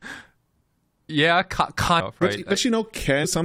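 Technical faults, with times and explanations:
1.99 s and 3.23 s, damaged data in a compressed stream: At both points a stretch of the compressed speech stream is corrupt, so the decoder misreads or rejects the frames there, loses its place, and has to hunt for the next valid frame header before it can carry on. Each time, that brief breakdown in decoding comes through as a short chirp or blip lasting under 20 ms, cutting across the speech.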